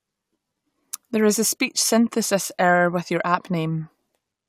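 No technical faults occur at any point in the time order of this speech.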